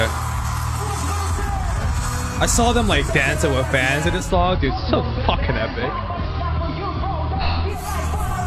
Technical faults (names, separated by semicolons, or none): digital radio blending to analogue